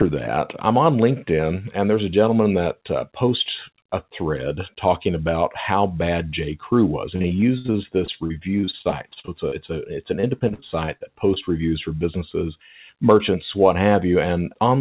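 Repeated packet loss (robotic sound) breaks up this speech clip from 7.16 to 9.71 s and again from 10.21 to 11.38 s. Bursts of lost packets, the longest gap about 63 ms, are patched by stretching the preceding sound, leaving choppy passages with pieces missing, heard over a call path band-limited at 4 kHz that fits G.711 at 64 kbps.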